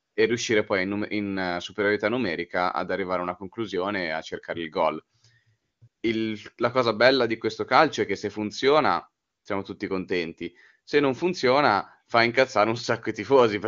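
At 0.00 to 0.15 s, 5.61 to 5.81 s, 5.87 to 6.03 s and 9.23 to 9.45 s the real background gives way to AMR comfort noise. In each gap of about 150 to 220 ms, the sending phone judged the talker silent and stopped sending speech frames, so the receiver substituted smooth synthetic hiss built from a coarse level and spectrum estimate. The steady texture switches abruptly against the clean wideband speech around it.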